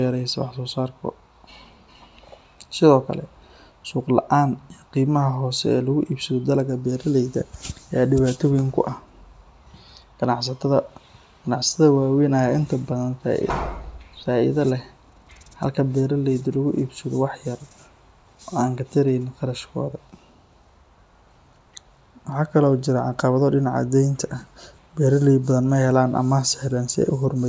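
No technical faults occur at any point in the speech, so there is nothing to describe in time order.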